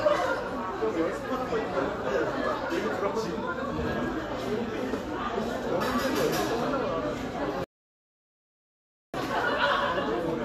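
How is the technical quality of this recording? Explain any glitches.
The recording has one clear glitch, a rebuffering stall. From 7.64 to 9.14 s the player ran dry and paused, adding about 1.5 s of silence before the sound resumed exactly where it stopped. On a waveform this appears as a flat line, and on a spectrogram as a blank vertical band.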